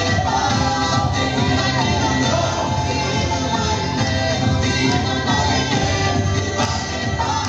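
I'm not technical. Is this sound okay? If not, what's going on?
No. From start to finish there's a faint grainy roughness riding on the sound itself. It gets grittier in the quieter stretches, and the very softest moments can crackle or cut out. This is likely low bit depth without dither: the audio was stored with too little detail, roughly 10 bits, and the values were simply chopped off, so the rounding errors move along with the sound.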